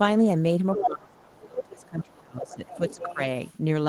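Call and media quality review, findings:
Other side's voice leaking through: second voice at 0.74–0.86 s, roughly equal to the talker's level; faint scraps at 1.39–1.43 s and 1.81–2.2 s; clearer at 2.46–3.56 s. Likely incomplete echo cancellation of loudspeaker playback. Spectrogram shows a second harmonic stack over the talker's own.

Speech suppressed in double talk: talker's level dips intermittently from 0.79 to 3.19 s, about 2 s affected in total, deepest drop about 25 dB. This is likely the echo canceller ducking both sides during overlap. The waveform shows the envelope dipping in those stretches.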